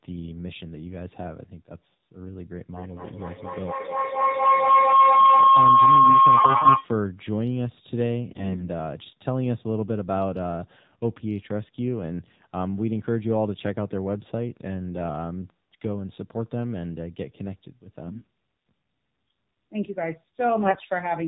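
The speech in this clip has been carried over an AMR narrowband mobile codec. Encoding at a low bit budget, which fits the 7.4 kbps mode of AMR-NB, cuts everything above 4 kHz and leaves the voice plainly buzzy and synthetic throughout. AMR bit errors strike four times, at 6.36–6.79 s, 8.31–8.69 s, 18.06–18.27 s and 20.64–20.85 s. A weak link flipped the less protected bits in runs of frames, at an error rate of several percent, misplacing the excitation pulses and skewing the gain and spectral values. Pitch and level hold roughly steady, but the voice turns hoarse, scratchy and gargly for those stretches.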